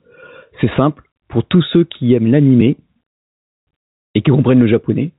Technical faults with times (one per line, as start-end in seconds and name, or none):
0.00-5.18 gain pumping
2.61 underrun with held sample